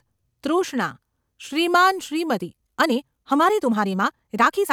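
From 2.33 s to the end of the clip, the speech suddenly runs about 1.63 times faster while its pitch stays the same: a time-stretched section, likely from software squeezing the audio to fit a shorter length by dropping short slices. It sounds rushed. A plain speed-up would raise the pitch along with the pace; here only the timing changes, and the abrupt onset rules out a natural quickening of delivery.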